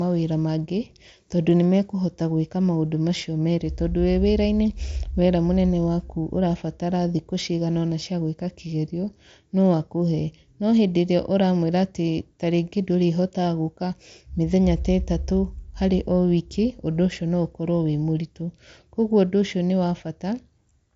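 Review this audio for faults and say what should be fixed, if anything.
No faults found in this audio; nothing needs fixing.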